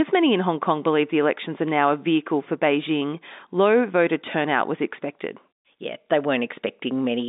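No technical faults can be heard in this speech clip. It carries the narrow sound of G.711 telephone coding, with the band held to roughly 200 Hz to 3.7 kHz, which fits a 64 kbps mu-law line.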